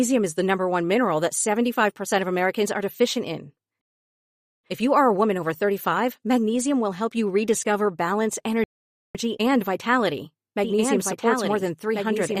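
At 3.81 s the speech halts in a rebuffering stall, silent for about 0.83 s until 4.64 s. Another follows from 8.64 to 9.15 s, adding about 0.51 s. Unlike a dropout, each resumes exactly where it stopped, so nothing is skipped. From 10.64 s to the end a doubled audio track appears: a full-band copy about 1.5 s behind, around 5 dB quieter, likely from a second, slower capture path. Unlike a room echo, it has no decay or colour and starts abruptly.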